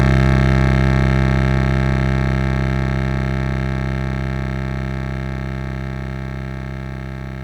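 Hard clipping runs from the start to 1.38 s of this music: the signal is driven about 3 dB past what a stage can pass, so its peaks are sliced flat. Those squared tops add high harmonics, heard as crackle and grit on loud moments.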